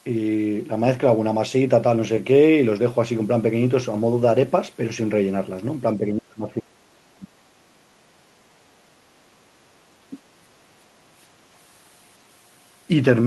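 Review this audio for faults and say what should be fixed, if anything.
Speech suppressed in double talk occurs from 5.98 to 7.71 s. The voice dips in pieces, for about one and a half seconds in total, falling as much as about 30 dB at its deepest. The likely cause is an echo canceller that heard far-end audio at the same time, could not separate it from this talker, and attenuated both. Packet-loss dropouts are brief, abrupt gaps; this instead pumps unevenly across the overlap. Preventing it requires a better double-talk detector and gentler suppression limits.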